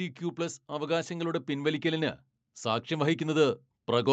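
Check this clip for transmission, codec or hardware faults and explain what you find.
One fault stands out, and it comes from level control rather than from the codec or the hardware. Automatic gain rising runs from 0.18 s to the end of the clip at 4.12 s. The gain control judged the incoming level too low and kept raising its gain step by step, so the speech and the background noise swell together in one slow, continuous climb, within a call band that stops at 8 kHz.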